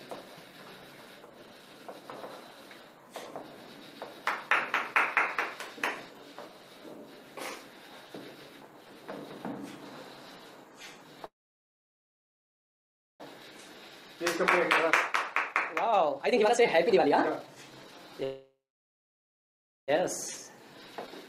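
Two call audio freezes, three jitter buffer speed-ups and one skip ahead disrupt this audio. The first freeze runs from 11.25 to 13.22 s and inserts about 1.9 s of sound that was never there. The last instant of audio is briefly held and then fades to silence, which is what remains for almost the whole stretch. The second freeze, from 18.24 to 19.90 s, adds about 1.6 s, of which about 1.3 s is silent. Both fit packets that were likely held up in transit, leaving the jitter buffer empty. On a spectrogram each shows a short smeared tail and then blank columns, with nothing lost when the audio resumes. After each stall the receiver shrinks its backlog by cutting pitch-period slices. From 13.43 to 14.25 s the audio runs at 109% speed, a hurried stretch missing only a few tens of milliseconds. From 15.07 to 18.14 s it runs at 155% and sheds roughly 1.5 s, and from 20.97 s to the end it runs at 124%. 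In these stretches harmonic lines stay at the same height while everything else is squeezed horizontally. In the waveform, events arrive closer together. Within that final speed-up, at 21.06 to 21.09 s, a skip ahead drops roughly 0.7 s of audio. Only about 12 ms of fill joins the two sides, which shows on the spectrogram as an abrupt vertical seam where the content changes without transition.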